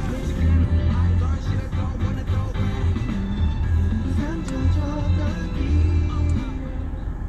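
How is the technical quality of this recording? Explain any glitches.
No technical faults or glitches can be heard anywhere in the recording.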